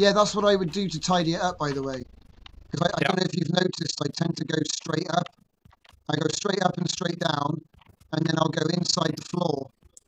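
From 2.0 s to the end of the clip, the audio carries overlap-add ripple: a fast, rough flutter in level at around 30 Hz. The swing is very deep, about 60 dB, so the signal nearly drops out on every cycle rather than just wavering. This comes from resynthesis of windowed frames whose overlap does not sum to a constant gain, leaving a gain dip at each frame boundary, once per frame.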